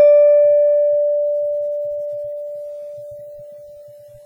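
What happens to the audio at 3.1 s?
At 3.1 s, as throughout the music, the sound rings and washes with a breathing hiss, likely WMA compression at a low bitrate near 24 kbps. A spectrogram shows smeared transients and sparse high bands.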